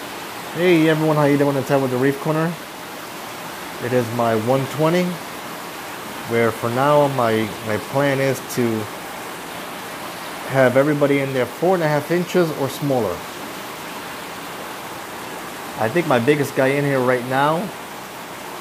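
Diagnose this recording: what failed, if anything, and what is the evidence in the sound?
Nothing stood out on listening that would point to a failure at any stage of the chain.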